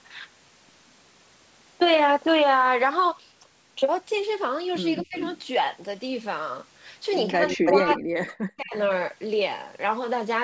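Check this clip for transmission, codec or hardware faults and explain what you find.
Two call-processing faults are audible: echo leaking back into the speech and speech being ducked during overlapping talk. The band also stops at 8 kHz, which fits normal call microphone processing.

Echo leak occurs at 4.94–5.42 s, 7.47–7.73 s and 7.89–7.94 s. A copy of the voice played on the far-end loudspeaker arrives about 254 ms late, around 15 dB below the main speech at first and only about 5 dB below later. This is likely from a far-end echo canceller failing to remove its loudspeaker pickup.

Speech suppressed in double talk appears at 5.03–5.16 s, 7.32–8.03 s and 8.25–8.75 s. The speech dips by roughly 20 dB in the first instance and up to about 40 dB in the later two. The likely cause is an echo canceller mistaking overlapping talk for echo and attenuating everything.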